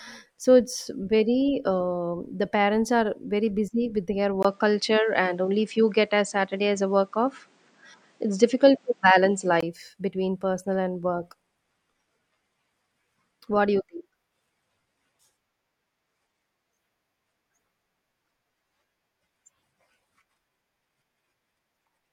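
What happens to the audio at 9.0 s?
At 9.0 s the sound is in a dull stretch, 4.43 to 9.63 s, after "busy with their". The input was likely switched to a poorer device that passes nothing above 9.2 kHz. Unlike a plain filter, it adds a 20 ms gap, a level shift of roughly 5 dB, and its own faint noise.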